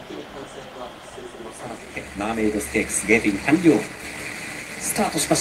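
No technical faults are audible.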